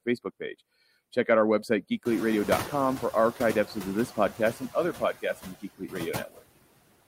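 Throughout the speech, noise suppressor artifacts are present. The suppressor pulls the steady background down by about 20 dB frame by frame, so the noise sinks between the words and rises under them. On a spectrogram the gaps show speckled, blotchy patches instead of an even noise floor.

Near 2 s the room noise jumps by about 21 dB and then sits about 13 dB below the speech. From 2.05 to 4.1 s the noise suppressor is catching up. Its estimate lags for about two seconds, so the louder noise at first gets only about 7 dB of reduction and then sinks. The waveform's floor steps up and tapers back down.

Between 4.93 and 6.42 s, speech is cut by the noise suppressor, about half a second in total. The suppressor mistook parts of the speech for noise and turned them down by as much as about 19 dB, so those parts sound swallowed and faint. These show as sudden notches in the waveform envelope and missing energy in the spectrogram.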